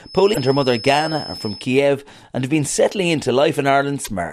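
Feedback whistle, 0.0 to 1.71 s: a thin, steady tone near 5.2 kHz sits behind the speech, roughly 15 dB below it, swelling and fading slowly in level before it stops. The likely cause is a loudspeaker-to-microphone loop held just at the edge of instability. The loop gain at that one frequency is high enough to keep the tone ringing but not high enough to make it grow into a howl.

Broken MP3 bit reservoir, 0.33 to 0.37 s and again at 4.04 to 4.08 s: each time the audio skips forward, and a brief chirp, burst of noise or short hole follows the jump. Each disturbance lasts under two frames and fits a decoder using 26 ms MP3 frames. The likely cause is missing frames. The frame after each gap reaches back into the reservoir for data that belonged to earlier frames, reads unrelated bytes instead, and decodes them into garbage until the stream resynchronises.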